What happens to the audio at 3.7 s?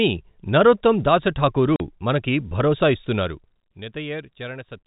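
At 3.7 s two faults overlap, both beginning after "మనకు భరోసా".

A feedback whistle runs from 2.87 s to the end of the clip. It is a thin, steady tone at 4 kHz, about 20 dB below the speech, swelling and fading slowly in level. The likely cause is a loudspeaker-to-microphone loop sitting right at the edge of oscillation, so that one frequency rings on continuously without building into a runaway howl.

Zipper noise is present from 3.16 s to 3.84 s, while the level falls by around 15 dB. The drop is applied in coarse 1 dB steps, roughly 30 per second, with no smoothing between them. Each jump puts a small discontinuity into the waveform, so the fade carries an audible ticking, zipping texture until it settles at 3.84 s.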